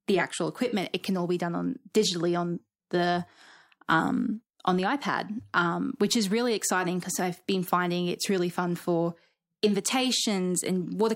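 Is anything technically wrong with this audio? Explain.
No, nothing technically wrong can be heard in this speech recording. No fault turns up anywhere in the clip.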